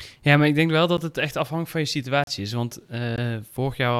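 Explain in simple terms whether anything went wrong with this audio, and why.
Three times the program producing this speech likely failed to hand over its next chunk of audio in time, so those moments were left empty. Each is a block of digital silence: at 0.97 s (about 11 ms, which fits a 512-sample buffer), from 2.24 to 2.27 s (about 35 ms), and at 3.16 s (about 17 ms). The sound drops out and returns abruptly, so you hear a tick or brief hole.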